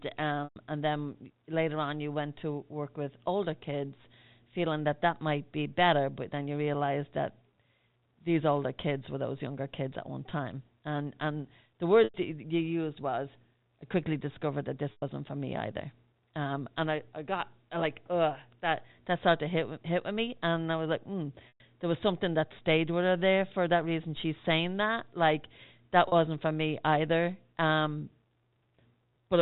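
At 0.44 s, 12.04 s, 14.92 s, 21.48 s and 26.08 s, the speech briefly breaks up. This is packet loss with pitch repetition. Audio went missing for 120, 100, 100, 120 and 40 ms, which fits 20 ms packets. The receiver fills each gap by repeating the last pitch cycle and fading it out. The 40 ms gap sounds like a short, buzzy held tone. The longer gaps fade into a brief silence before the speech cross-fades back, all within the narrow G.711 telephone band.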